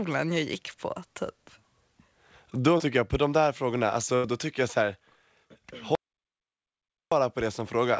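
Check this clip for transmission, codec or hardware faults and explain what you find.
Three faults are audible in this speech clip: a short concealed packet loss, a longer burst of packet loss, and a dropout to silence. The band-limiting to nothing above 8 kHz is what a G.722 wideband call path produces.

Short concealed packet loss, 2.78 to 2.82 s: a brief smear in the speech. About 20 ms of audio never arrived in time, so the receiver extended the preceding sound for roughly 16 ms and then crossfaded back into the real signal.

Burst of packet loss, 4.16 to 4.26 s: about 80 ms of consecutive audio was lost. Concealment held and faded the last sound for roughly 83 ms, giving a sustained buzz or fading hiss before the speech resumes with a section missing.

Audio dropout to silence, 5.95 to 7.12 s: the sound cuts to silence for about 1.16 s, with no room tone. The input was likely interrupted while silence continued to be written, so that stretch of speech is gone.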